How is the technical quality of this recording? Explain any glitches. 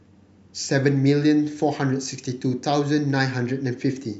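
The technical quality of this recording is good, with no glitches to explain.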